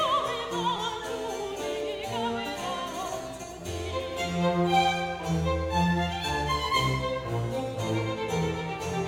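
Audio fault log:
0.77 s, repeated buffer: a brief buzzy click in the music, where one 5 ms slice plays three extra times with a hard join at each restart, a 200 Hz rattle. New audio arrived late, so the device replayed its last buffer; essentially nothing is lost.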